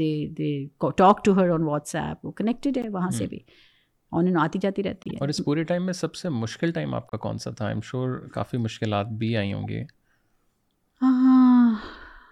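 Corrupt frames decoded at 2.82–2.85 s, 5.03–5.11 s, 7.08–7.13 s and, more faintly, 11.94–11.96 s leave brief bursts of misplaced sound. Damaged bits misplace energy across a few frames, putting sound at the wrong frequencies.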